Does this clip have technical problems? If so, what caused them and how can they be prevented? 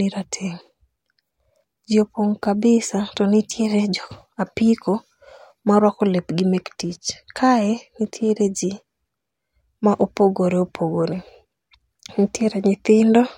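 Yes. Dropped samples at 8.05 s give a single sharp click in the speech, likely from a fraction of a millisecond missing, so the waveform jumps abruptly. Prevent it with larger, stable buffers during capture and processing.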